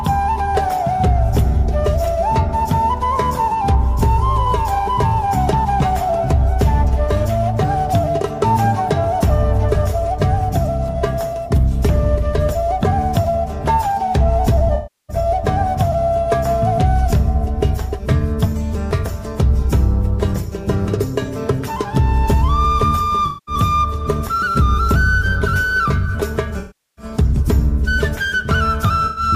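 Smeared, noisy patches at 14.75–15.16, 23.26–23.55, 26.59–27.05 and 29.06–29.22 s reflect AAC frame loss with concealment, where the decoder rebuilt missing frames from the last good spectrum.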